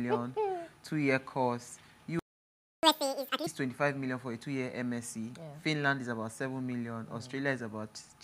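At 2.19 s the sound cuts out mid-flow and stays silent until 2.83 s, a gap of about 0.64 s. This is a playback stall: the output went dead, likely because the player ran short of buffered data or its audio thread was held up.

From 2.83 to 3.47 s comes catch-up at higher speed. The player works through its backlog at 2.0 times normal rate by resampling, so the sound rushes and jumps up in pitch by roughly ten semitones, then returns to normal speed and pitch.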